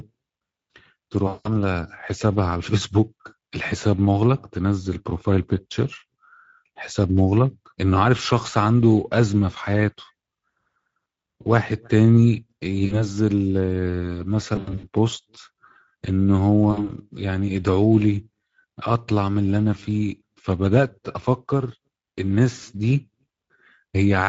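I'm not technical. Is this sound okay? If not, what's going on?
No. Throughout, the speech sounds rough, hoarse and noisy, as if squeezed. That is damage from the Speex codec, an older internet-call compression that keeps too little detail.

At 1.27–1.57 s, 12.85–13.06 s, 14.55–14.88 s and 16.71–16.90 s the speech is stretched into a buzz or a coloured noise that fades. That is VoIP packet loss concealed by the speech codec. Pieces of the call went missing, and the decoder filled the gaps by stretching the last sound. The first and third gaps were each about 180 ms, and the third was broken up into short bursts. The others were about 60 ms.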